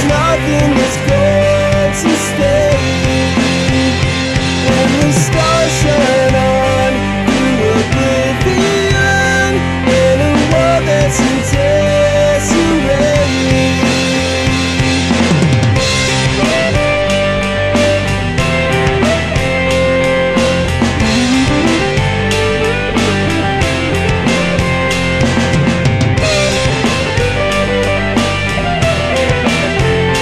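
Nothing in the recording stood out as a technical problem on listening.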